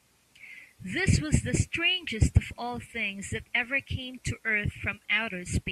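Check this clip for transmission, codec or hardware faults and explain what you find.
No transmission, codec or hardware faults turned up.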